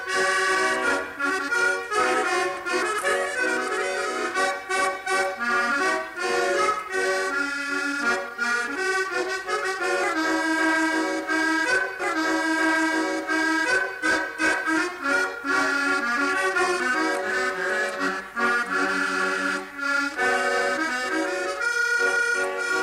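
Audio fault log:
12.0–14.0 s, stream segment repeated: a 2-second stretch of the programme plays a second time, adding 2 seconds to the running length. The player fetched or queued the same segment twice, so at 12.0 s playback jumps back and the passage recurs, marked by a small blip at the splice.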